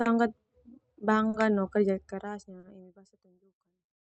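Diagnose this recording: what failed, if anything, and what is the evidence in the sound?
Clock drift between sender and receiver, throughout: the sender's clock runs roughly 3 percent slow, so the receiver's jitter buffer keeps draining and the timing hiccups recur across the whole clip.

Short stalls from a late packet at 0.01–0.07, 1.29–1.35, 2.59–2.65 (after "kerja keras", before "emi basa") and 3.87–3.93 s: the buffer ran empty, so about 40 ms of sound is held, then playback resumes.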